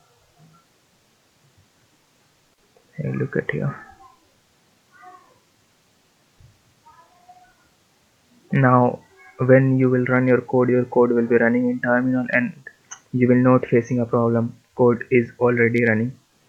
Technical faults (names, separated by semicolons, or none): none